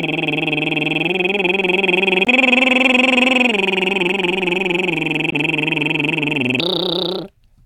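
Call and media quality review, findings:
Damaged data in a compressed stream: short glitches in the music at 2.24–2.28 s and 5.29–5.34 s. Decoder hits bad frames, loses sync, resumes at the next frame header. Unlike a dropout, the cause is corrupted frames rather than lost signal.

Section at the wrong speed: from 6.60 s to the end the music runs 1.44 times fast, pitch about seven semitones higher and tempo hurried together. Likely an editor or player clocking that section wrong. Unlike pitch-shift processing, pitch and tempo change jointly.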